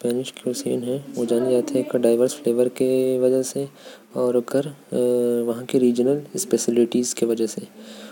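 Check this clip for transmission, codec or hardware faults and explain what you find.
Nothing faulty turns up anywhere in this speech recording. There is no event to report, so there are no times or values to give.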